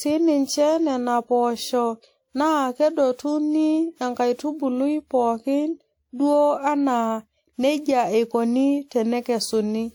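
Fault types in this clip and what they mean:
Generation loss, throughout: The speech sounds swirly, smeared and hollow across the whole clip, with consonant onsets blurred, even though the band still extends to about 20.1 kHz. That mix of full bandwidth with degraded detail most likely comes from repeated lossy re-encoding, about four passes of a WMA-like codec near 96 kbit/s, each quantising on a shifted frame grid so errors and spectral holes accumulate.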